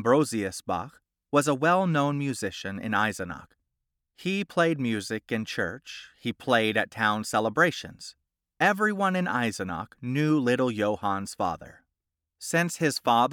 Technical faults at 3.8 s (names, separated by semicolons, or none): none